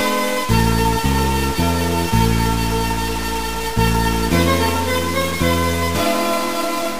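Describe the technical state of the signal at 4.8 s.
At 4.8 s the signal carries a stuck bit, present across the whole clip. One data bit is held fixed, likely from a broken line or converter. Samples jump by a step of around -25 dBFS. This gives harsh, buzzy distortion, and quiet passages fill with noise.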